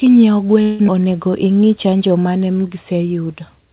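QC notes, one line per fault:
0.62–0.81 s, call audio freeze: the sound stalls into a fading buzz for about 170 ms, then carries on exactly where it left off. Nothing is lost, but a gap is inserted, most likely because late packets let the jitter buffer run dry.
0.87–0.90 s, skip ahead: playback lurches forward, with only about 11 ms of fill at the seam. Roughly a tenth of a second of audio is dropped and the two sides are butted together, pulling back much of the delay the freeze had just added.
1.31–2.18 s, jitter buffer slow-down: the sound drags, with stretched sounds but unchanged pitch, running at about 92% speed. The receiver repeated individual pitch periods, adding 76 ms in total, to rebuild its reserve in the jitter buffer.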